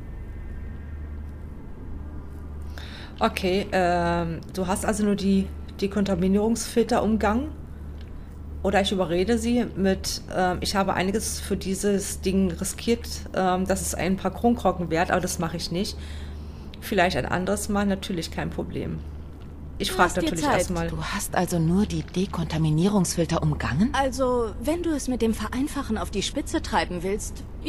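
Nothing here stands out as a technical fault, so there's nothing to flag anywhere along the way.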